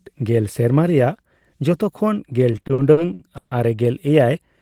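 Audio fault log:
2.51–3.53 s, repeated stalls (stutter). Packets arrived late, so the jitter buffer kept running dry. Nine times the player stretched the last sound to cover, for 360 ms in total. The longest hold lasts 140 ms. Nothing drops out, but about a third of this stretch drags and stutters.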